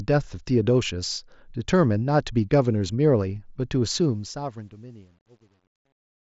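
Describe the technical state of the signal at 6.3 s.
At 6.3 s the fade-out sits inside truncation distortion on a fade (3.98 to 6.33 s). The level stage drops bits without dither, which fits roughly 10-bit resolution. The quietest tail, worst from 4.7 s onward, turns gritty.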